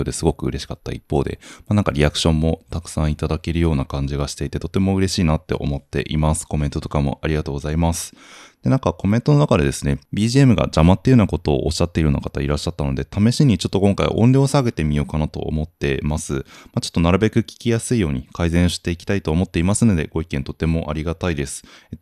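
No technical faults occur at any point in the clip.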